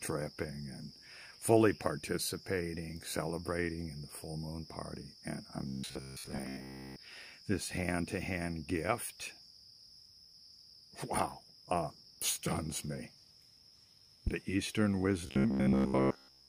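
Robotic sound from repeated short buffers, 5.67 to 6.98 s and again 15.27 to 16.48 s: the audio likely arrives too seldom, so fragments of about 15 ms are replayed in place of most of the missing sound, forcing a rigid metallic buzz at 66.7 Hz. A loud pop at 14.27 to 14.30 s, a single sharp pulse about 15 dB above the surrounding sound, likely comes from a sudden voltage step or driver glitch.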